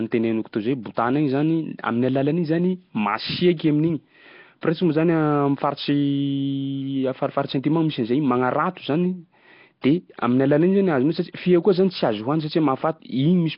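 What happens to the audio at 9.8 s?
From 9.81 to 9.84 s a sharp attack is preceded by about 22 ms of pre-echo, a brief hiss ahead of the onset. The transform coder spreads quantisation noise across the whole block, so noise sized for the loud attack also fills the quiet moment before it, leaving the onset soft and smeared. The surrounding audio carries heavy codec damage, a rough, hissy, underwater quality with nothing above 5.3 kHz, likely from Nellymoser compression, which fits a low bitrate around 22 kbps.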